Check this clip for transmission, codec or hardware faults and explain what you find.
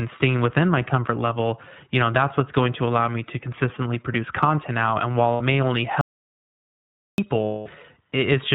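Three faults are present: iLBC coding across the whole speech clip, two bursts of lost iLBC frames, and one dropout to silence.

The iLBC codec is audible from start to finish, and the damage is plain. Nothing above 4 kHz gets through, so the speech sounds narrowband and muffled at the top. The codec codes each frame's excitation on its own. That leaves the voice clear but slightly rough and synthetic. The coding fits iLBC's 15.2 kbps mode with 20 ms frames.

Lost iLBC frames occur twice. The first runs from 5.32 to 5.42 s and lasts 80 ms, which fits four lost 20 ms frames. The second runs from 7.44 to 7.68 s and lasts 220 ms, which points to eleven frames. In each gap the decoder repeats the last pitch cycle mixed with noise. This gives a held, buzzy, vowel-like tone, and the longer gap fades. Because iLBC frames stand alone, the speech recovers at once.

An audio dropout to silence runs from 6.01 to 7.18 s, about 1.17 s. 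The speech cuts off mid-flow and returns abruptly. The gap is silent with no room tone, so nothing from that stretch survives. The likely cause is lost input, such as a disconnected device, a failed link or a stray mute, while the recorder kept writing silence.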